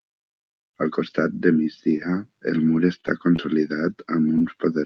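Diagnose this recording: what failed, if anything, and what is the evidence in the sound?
Network and jitter buffer stage: a short stall from a late packet. Just after "el mur", from 3.01 to 3.06 s, the speech holds for about 29 ms with a faint buzz or dip. The buffer ran dry and the decoder stretched the last sound. Nothing was lost. Playback simply resumed 29 ms later.

Network stage, with concealment in the decoder: short concealed packet loss at 3.36 to 3.40 s and 4.38 to 4.42 s. Each gap is a brief smear or wobble. About 20 ms of speech never arrived each time. The decoder extended the preceding sound to cover the hole, then crossfaded back into real audio.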